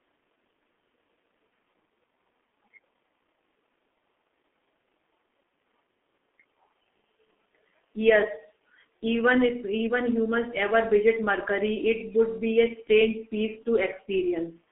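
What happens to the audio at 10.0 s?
At 10.0 s the speech is under G.723.1 codec damage that runs through the whole clip. The heavy low-rate coding, which fits a 6.3 kbit/s stream, leaves it muffled and hoarse with smeared consonants. A spectrogram shows a hard ceiling near 3.7 kHz and blurred, frame-stepped formants.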